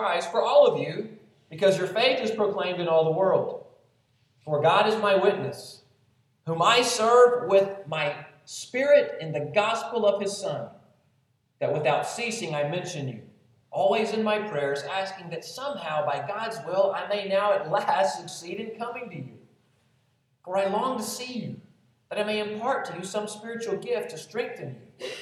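A small jump in the sound at 12.12 s and again at 18.41 s, likely a dropped buffer (overrun), skipping a few milliseconds of audio with no gap.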